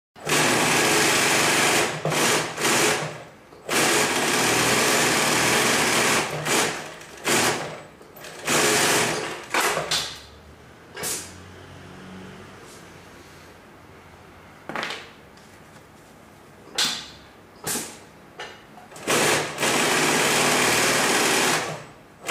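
No technical faults occur anywhere in the audio.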